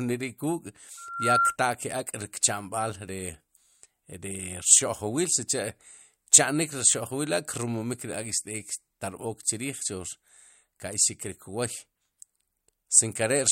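From 0.97 to 1.57 s a loudspeaker feedback squeal cuts into the speech: the microphone is re-amplifying its own loudspeaker, and at 1.4 kHz the loop gain tops unity, so that one tone feeds on itself. It swells over roughly 0.4 s into a piercing whistle a few decibels louder than the speech. A spectrogram shows a single bright horizontal line at 1.4 kHz, and the waveform's envelope balloons until the loop breaks.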